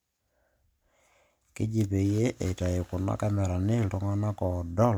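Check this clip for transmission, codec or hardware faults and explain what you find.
Nothing in the speech here points to a transmission, codec or hardware fault.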